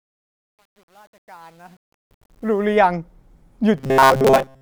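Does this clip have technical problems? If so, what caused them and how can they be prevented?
Yes. From 0.0 to 2.77 s, the fade-in has truncation distortion. The quiet start, worst up to 2.2 s, sounds gritty, which fits a stage keeping only about 9 bits without dither. Keep fades at full resolution and dither when reducing bit depth.

From 3.77 to 4.61 s there's a robotic sound, a rigid metallic buzz around 133 Hz. The likely cause is a roughly 7.5 ms buffer being replayed while new audio arrives late. Bigger buffers or more stable delivery should prevent it.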